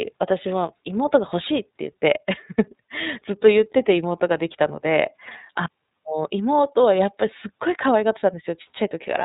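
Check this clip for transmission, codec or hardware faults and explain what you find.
One codec fault runs through the whole clip. iLBC codec damage is plainly audible from start to end: the speech is cut off above 4 kHz and sounds slightly rough and synthetic. The rate fits the 13.33 kbps mode, which uses 30 ms frames. Each frame's excitation is coded without reference to the previous frame, giving a rough, synthetic quality rather than a simple filtered dullness.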